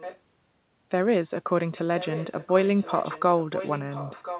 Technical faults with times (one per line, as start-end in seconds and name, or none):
0.00-0.19 echo leak
1.98-4.39 echo leak